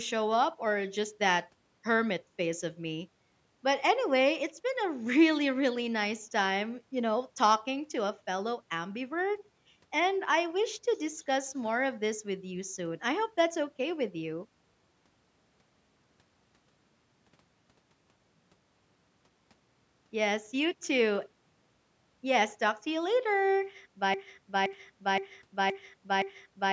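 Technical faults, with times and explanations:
24.14–26.72 s, broken-record loop: a 0.52 s fragment of speech repeats five times back to back until the end, likely a stalled stream resending its last buffer.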